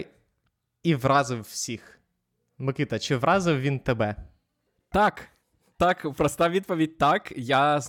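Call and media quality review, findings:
No faults found in recording.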